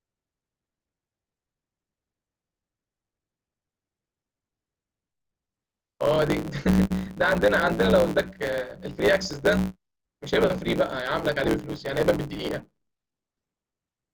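From start to finish the speech carries a block size mismatch (truncated). One stage writes longer blocks than the next stage reads, so the tail of every block is dropped, which fits blocks of 512 samples. The speech runs about 1.16 times fast under a steady 109 Hz buzz. A spectrogram shows vertical lines about 9.2 ms apart and a 109 Hz harmonic comb, and the waveform has jumps at each block boundary.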